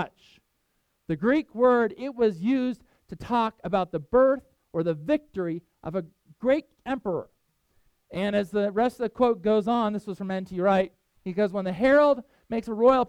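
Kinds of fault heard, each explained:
No technical fault can be heard anywhere in this audio. There is nothing to list under any kind.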